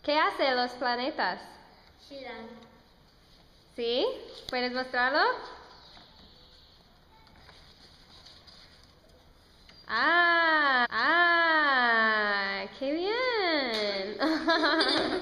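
At 10.85 s a stream segment is repeated: the player queued the same chunk twice, so about 1.02 s replays through 11.87 s after a small blip at the jump back.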